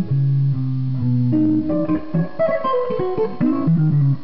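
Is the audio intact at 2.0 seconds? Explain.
No. At 2.0 s the audio sits inside a time-stretched section that runs from 1.29 s to the end of the clip at 4.23 s. From 1.29 s the pace jumps abruptly to about 1.76 times normal speed while the pitch stays unchanged. The likely cause is software squeezing the passage to fit a shorter length, dropping short pieces to hold the pitch, which makes this stretch sound rushed.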